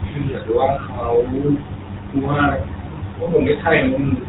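Speech passed through the GSM full-rate codec, with damage plainly audible from start to finish, and the sound fits its 13 kbps rate. The vocal-tract model is driven by sparse, regularly spaced pulses, so the speech has the gravelly, buzzy roughness typical of GSM, and nothing above 4 kHz comes through. A noise suppressor is also mistaking parts of the speech for background across almost the whole clip. It pulls quiet stretches down with the room noise by up to about 19 dB, so soft consonants and word endings sound swallowed or faint. The room noise itself sits about 20 dB below the speech. Lost GSM frames occur at 3.24 to 3.27 s, which points to a single dropped frame. The decoder repeats the last good frame's settings, and this leaves a brief rough, metallic ring in place of the missing sound.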